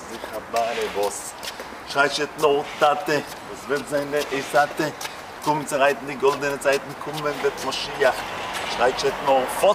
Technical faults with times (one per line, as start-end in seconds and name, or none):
none